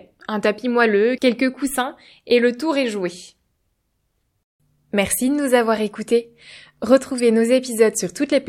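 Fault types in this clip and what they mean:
Corrupt frame decoded: a brief glitch at 7.18 to 7.20 s, where a single compressed frame with damaged bits was decoded, misplacing energy across frequencies.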